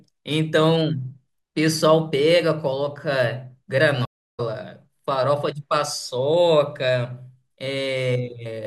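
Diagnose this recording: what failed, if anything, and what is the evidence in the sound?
The network connection dropped and the player had to perform a stream reconnect, starting a new decoder partway through the stream. In the speech, the audio cuts out at 4.05 s and stays silent for about 0.33 s, until 4.40 s. When it returns, it does not pick up where it stopped: roughly 0.4 s of speech is missing, because playback resumed at the live position rather than at the point where the connection was lost.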